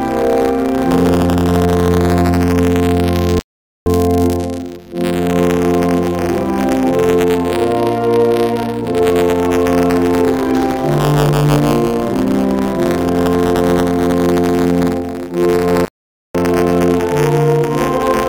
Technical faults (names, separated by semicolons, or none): buffer tearing; rebuffering stall